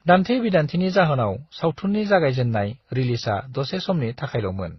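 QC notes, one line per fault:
Throughout: transcoding between lossy codecs. Nothing above 5.9 kHz, with mixed smearing and swirly artefacts rather than one codec's single signature, likely from an MP3, HE-AAC and Opus chain.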